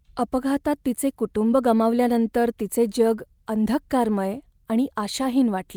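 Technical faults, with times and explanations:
No technical faults can be heard anywhere in the signal.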